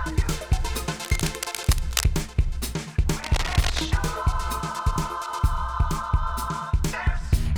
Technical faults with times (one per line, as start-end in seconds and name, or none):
1.03-2.07 cable scratch noise
3.23-3.80 cable scratch noise